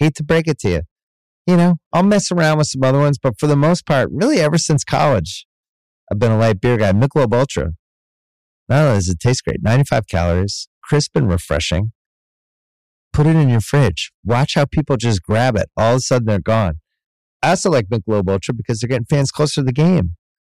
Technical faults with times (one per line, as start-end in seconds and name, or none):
0.00-20.48 hard clipping